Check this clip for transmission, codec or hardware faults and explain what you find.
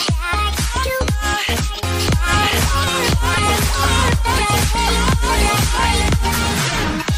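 There's one real fault here: a doubled audio track from 2.08 to 6.26 s. A full-band copy trails the original by about a second at roughly the same level, with no decay or room colour, and it cuts in and out abruptly. That's likely a second, slower capture path.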